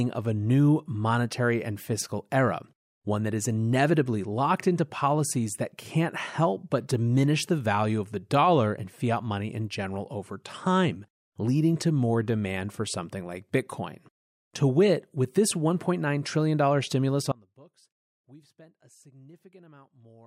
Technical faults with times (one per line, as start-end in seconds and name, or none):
17.32-20.27 audio dropout to a faint residue